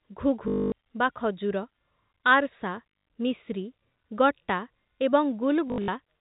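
Packet loss with the last packet repeated hits at 0.48 to 0.72 s, 2.9 to 3.06 s and 5.68 to 5.88 s. Each gap is filled by looping the last chunk, giving a robotic stutter with a buzz that fits 20 ms packets. The band-limited G.711 telephone sound carries on underneath.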